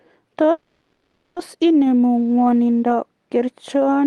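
A call audio freeze runs from 0.51 to 1.38 s. The sound stalls and the last fragment is stretched into a fading buzz lasting about 0.85 s. The speech then resumes exactly where it stopped, with nothing lost and everything afterwards running late. The likely cause is packets held up in transit, which left the jitter buffer empty.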